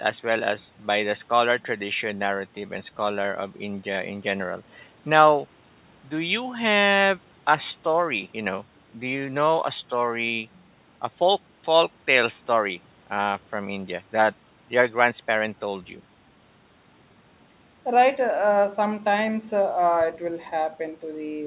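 Nothing stood out on listening to this speech, which arrives over a call path that carries nothing above 4 kHz.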